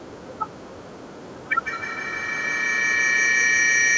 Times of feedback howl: 1.49-3.97

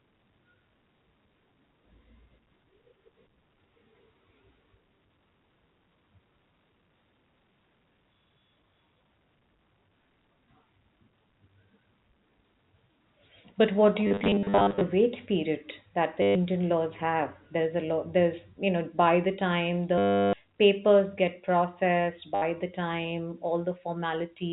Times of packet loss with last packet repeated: 14.07-14.81, 16.22-16.35, 19.98-20.33, 22.35-22.42

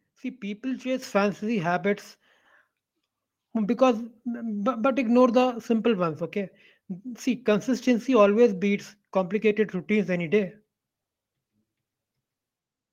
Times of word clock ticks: none

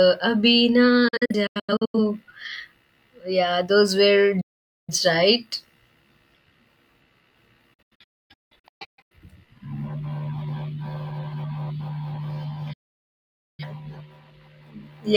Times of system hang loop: none

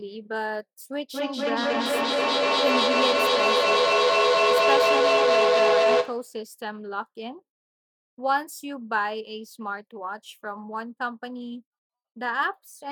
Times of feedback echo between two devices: 1.13-6.39

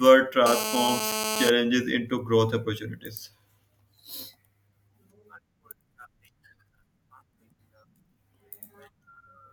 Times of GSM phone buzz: 0.46-1.50

